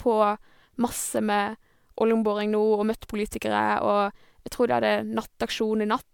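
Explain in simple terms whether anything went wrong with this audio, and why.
Something did go wrong: across the whole clip the speech sounds swirly, smeared and hollow, with word onsets blurred. That points to generation loss, likely from the audio being compressed and decoded around five times. Unlike a single low-quality encoding, each round added fresh damage.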